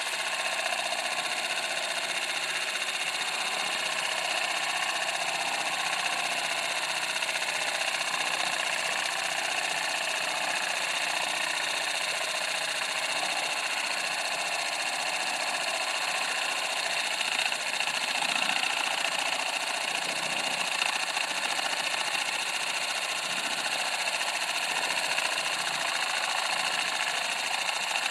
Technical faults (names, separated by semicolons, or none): none